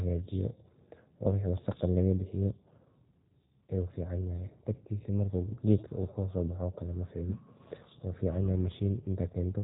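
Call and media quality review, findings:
Speech rough and slightly synthetic throughout; codec damage plainly audible. Nothing above 3.8 kHz. Probable component: G.729 codec, sound fits the 8 kbit/s G.729A variant. Mechanism: each 10 ms frame resynthesised from vocal tract filter, pitch predictor and a few pulses, so fine waveform detail and upper band are discarded.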